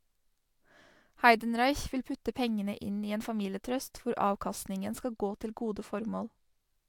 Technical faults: channel delay (comb filtering)

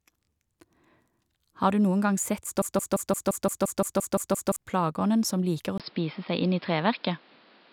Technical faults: broken-record loop; input switched to a poorer device

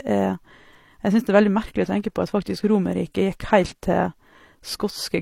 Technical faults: transcoding between lossy codecs

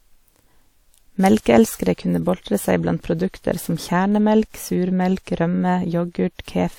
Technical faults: pre-echo

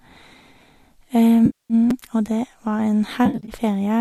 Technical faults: repeated buffer; AAC frame loss with concealment

